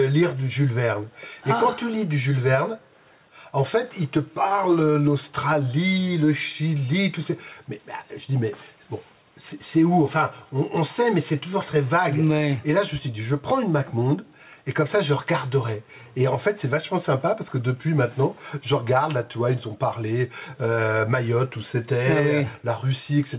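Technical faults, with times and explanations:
Throughout, gain pumping: the level swings by roughly 5 dB, likely from excessive gain and a fast limiter pulling it down on each loud sound. The waveform looks squashed and even, and there is nothing above the call path's 4 kHz ceiling.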